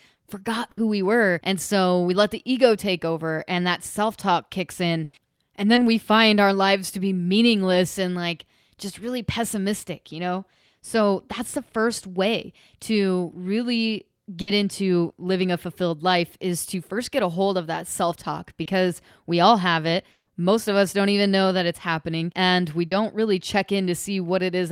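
Bursts of packet loss at 0.71 to 0.79 s and 5.03 to 5.15 s drop several consecutive packets. The receiver extends the last sound for about 60 ms and then 100 ms, a fading buzz or hiss, before the audio resumes with that stretch gone. A short concealed packet loss at 5.75 to 5.79 s loses only a couple of hundredths of a second, which the decoder patches from the preceding sound, leaving a brief smear or wobble. Another burst at 14.41 to 14.49 s repeats the 60 ms held-and-faded gap. A further short concealed loss at 18.63 to 18.67 s again shows as a quick smear. From 20.11 to 20.29 s, the last sound is stretched into a decaying tone, then drops into roughly 60 ms of near silence before the audio returns with that section missing, likely a long network dropout. A final short concealed loss at 22.87 to 22.93 s covers about 40 ms, a slightly longer wobble where the real audio blends back in.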